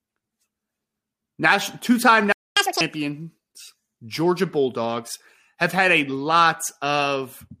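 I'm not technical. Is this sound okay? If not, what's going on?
No. At 2.32 seconds the speech suddenly goes silent for about a quarter of a second. This is a playback stall. The player likely ran out of audio data to play, so nothing came out until it caught up again at 2.57 seconds.

Right after that, from 2.57 to 2.81 seconds, there is catch-up at higher speed. The player rushes through the audio it missed at double speed. The voice sounds sped up and squeaky, roughly ten semitones higher, then returns to normal.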